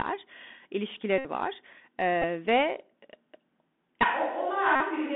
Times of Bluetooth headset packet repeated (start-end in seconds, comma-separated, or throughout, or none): 1.18-1.25, 2.22-2.24, 4.75-4.82